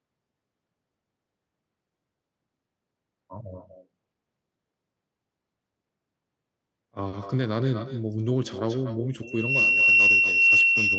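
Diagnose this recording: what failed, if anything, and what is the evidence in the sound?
Echo with no canceller in the far end's call processing: throughout the speech, each phrase returns about a fifth of a second later as a thinner copy only about 6 dB down. Unlike room reverberation, it is a distinct repeat at a fixed lag.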